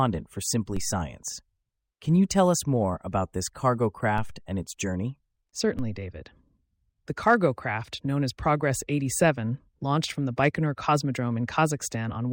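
At 0.77 s the speech is hit by a DC step: the waveform's zero line jumps by about -23 dBFS and then drifts back as if through a 2 Hz high-pass, heard as a low thump beneath the unchanged speech. The same fault recurs at 4.18 s, between "more about this cargo" and "and its journey", again about -23 dBFS, and at 5.79 s at about -25 dBFS. On a waveform each appears as a sudden baseline shift easing back to centre; a spectrogram shows a brief broadband click concentrated at the lowest frequencies.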